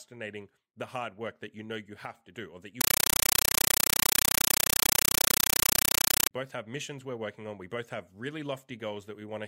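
Compressed stream played as audio, 2.81 to 6.31 s: AC-3 data played as raw samples replaces the speech with loud chattering static, 8 ms bursts 31.25 times a second.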